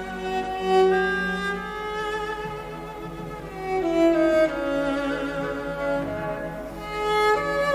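Nothing in the audio stood out as a technical fault on listening.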